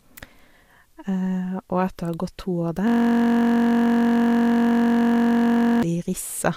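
From 2.88 s to 5.83 s a system hang loop takes over. The system stalled while the audio hardware kept replaying one 21.33 ms slice of its ring buffer, which fits a 1024-sample buffer. The repeated slice produces a steady 46.9 Hz buzz.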